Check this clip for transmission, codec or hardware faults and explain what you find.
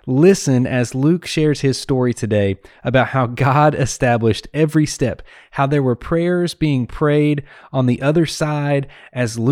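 No transmission, codec or hardware faults are audible anywhere in this speech recording.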